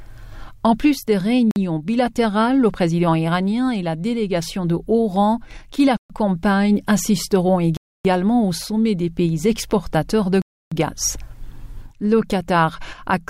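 The sound cuts to silence and resumes at 1.51 s, 5.97 s, 7.77 s and 10.42 s, for 49 to 299 ms, likely Bluetooth stalls emptying the headphone buffer.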